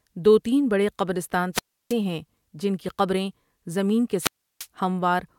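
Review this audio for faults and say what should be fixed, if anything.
Two wireless microphone squelch dropouts: static rises, then near silence. At 1.53–1.94 s, after "تین بڑے قبرستان" and before "ہیں جن کی قبریں", the hole lasts 0.32 s. At 4.19–4.67 s, after "کی قبریں زمین کے", it lasts 0.34 s. Each time, the microphone's radio signal faded until the receiver's squelch muted the output. To prevent this, keep the receiver antennas in clear line of sight of the transmitter, and check channel choice and transmitter battery strength before recording.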